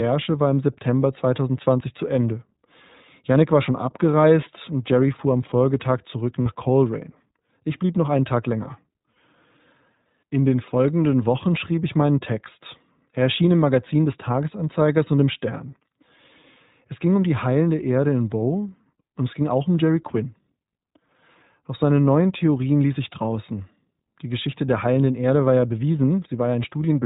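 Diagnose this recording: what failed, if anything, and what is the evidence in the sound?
iLBC codec, throughout: at the codec stage, nothing passes above 4 kHz, and the speech has a rough, synthetic edge that fits iLBC at about 15.2 kbps with 20 ms frames.

Lost iLBC frames, at 6.42–6.47 s, 9.12–9.16 s and 25.60–25.62 s: network packet loss left 40 ms, 40 ms and 20 ms gaps. The decoder filled each gap with a repeated, buzzy pitch cycle, and the sound recovers almost at once.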